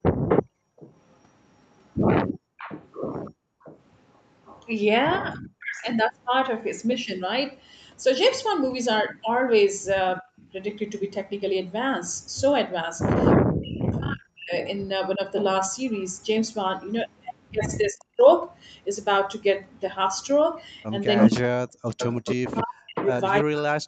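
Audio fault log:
0.03–3.64 s, background gated by the echo canceller: the room sound ducks by up to about 33 dB for roughly a second in total as the canceller clamps the microphone while the loudspeaker plays.
0.28–4.65 s, echo leak: a copy of the sound returns 333 ms late, about 10 dB under the direct signal, likely because the far end's canceller let loudspeaker pickup through.
5.19–5.89 s, speech suppressed in double talk: the talker drops by around 40 dB in pieces, likely because overlapping speech made the canceller suppress everything at once.
8.98–10.4 s, echo leak: a faint repeat trails 333 ms behind, about 25 dB down, likely residual loudspeaker sound that the far-end canceller missed.
10.21–10.28 s, speech suppressed in double talk: a brief dip of about 20 dB, likely the canceller mistaking overlapping speech for echo and attenuating both.
13.44–18.27 s, speech suppressed in double talk: repeated cuts of around 40 dB totalling about 1.5 s, likely the canceller attenuating the talker whenever both sides overlap.
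17.15 s to the end, echo leak: the 333 ms delayed copy arrives at about the same level as the direct speech, likely because the far-end canceller passed the loudspeaker pickup almost unreduced.
21.28 s to the end, speech suppressed in double talk: the talker cuts out by around 40 dB during overlap, likely because the canceller turns down both its own talker and the echo together.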